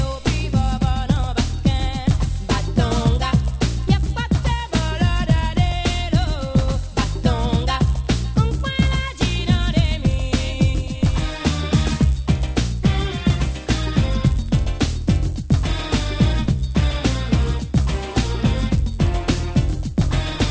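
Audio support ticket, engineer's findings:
Constant 100 Hz buzz under the signal, whole clip. Resampler restarted on every block: 24 kHz to 16 kHz per 10 ms block, edge errors repeating at the block rate.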